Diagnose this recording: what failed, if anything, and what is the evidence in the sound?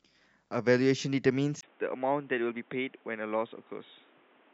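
From 1.61 s onward, after a 20 ms gap, the speech turns boxy with nothing above 3.8 kHz, drops about 5 dB and gains noise roughly 30 dB down. This is likely the input switched to a poorer device at the driver stage. A codec narrowing would not change level and noise together.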